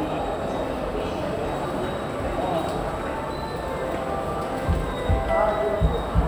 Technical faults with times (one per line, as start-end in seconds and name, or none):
none